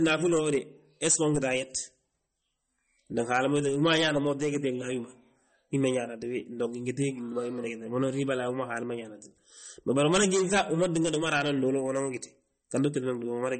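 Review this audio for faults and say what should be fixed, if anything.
The speech carries plainly audible damage from start to finish, likely from MP3 compression. Nothing is present above 8.4 kHz, so s sounds lose their edge and the top end sounds dull. Weak frequency detail flickers in and out between frames. That gives the speech a watery, swirly quality, and consonant attacks smear. The damage points to a very low bitrate, around 35 kbps. Too few bits forced the encoder to drop treble and thin out detail. To prevent it, encode from the original source at a much higher bitrate, or use a lossless format.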